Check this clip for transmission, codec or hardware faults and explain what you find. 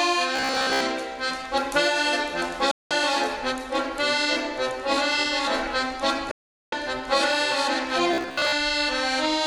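Two kinds of fault appear: a robotic buzz at two points and two broadcast dropouts.

Robotic sound from repeated short buffers occurs from 0.36 to 0.84 s and again from 8.14 to 8.52 s. The sound turns into a rigid, metallic buzz at 66.8 Hz. It roughly tracks the underlying sound. The likely cause is late-arriving audio. The player loops a fragment of about 15 ms to cover the gaps. Most of the real audio in those spans is skipped, and the loop period sets the buzz pitch.

The digital broadcast dropouts occur from 2.71 to 2.91 s and from 6.31 to 6.73 s. The receiver lost valid frames and muted until clean ones returned. The audio fades out in about 3 ms, leaving gaps of 192 ms and 408 ms. Both lengths fit frames of about 24 ms. Whatever was transmitted during each gap is gone, and the sound resumes further along.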